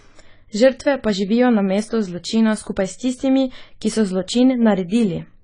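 From start to end, the speech sounds dull and smeared. Nothing reaches above 10 kHz. Sibilants fizz, and sustained vowels warble. The likely cause is AAC compression. The damage fits AAC-LC at a starved bitrate, around 24 kbps, cutting the top and coarsely quantising the rest.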